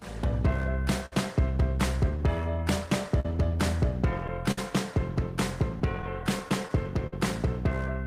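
Small timing hiccups at uneven intervals run through the whole clip. This is clock drift between sender and receiver: the sender's clock runs about 5% slow, so the jitter buffer keeps draining. From 1.06 to 1.13 s, and again at 3.20 to 3.25 s, 4.51 to 4.58 s and 7.07 to 7.13 s, the sound hangs for 45 to 60 ms with a slight buzz or dip before resuming intact. Each is a short stall from a late packet: the buffer ran empty and the receiver held the last sound until the data arrived. Between 2.17 and 3.07 s the playback runs slightly slow. Here the receiver made repeated timing corrections, playing at 97% speed and repeating small pieces to add roughly 40 ms. From 5.60 to 6.70 s, about seven brief ticks and smears appear, each around 10 ms or less. These are scattered short gaps from late or lost packets, each patched by continuing the previous sound.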